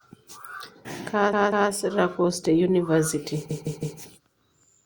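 At 1.33 s, repeated frames: a 192 ms block, consistent with six codec frames, plays twice more, stuttering to 1.71 s and adding 384 ms. At 3.50 s, a 160 ms block repeats three extra times through 3.99 s, adding 480 ms.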